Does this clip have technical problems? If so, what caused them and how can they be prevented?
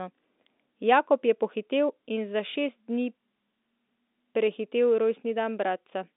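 No, nothing stood out on listening to this speech clip, so there is nothing here that needs preventing.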